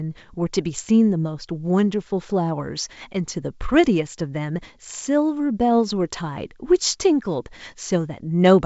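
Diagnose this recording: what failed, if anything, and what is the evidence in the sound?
Nothing failed in this recording, and no stage shows a fault; the sound is consistent with G.722 wideband telephone coding at 64 kbit/s working as intended.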